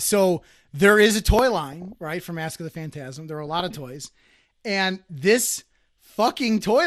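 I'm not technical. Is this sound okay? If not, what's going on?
No. Two things are wrong with it.

The whole recording sounds dull and plainly gritty, with a clear gurgling texture under the speech. That is MP2 compression, likely from digital radio squeezing the sound into too little data. The system divides the sound into narrow slices and, short of room, switches off the higher slices and rounds off the rest. This dullness and grain stay steady from start to finish, which separates it from the second problem.

That second problem is DAB burbling, which comes in two short bursts: from 1.71 to 1.95 s, and again from 3.46 to 3.70 s, each about a quarter of a second long. In those moments the sound briefly burbles. This happens when a weak radio signal corrupts a small share of the data, putting short blips of noise into individual slices of sound. Unlike the compression, it comes and goes in these sudden bursts, and the first burst is heavier than the second.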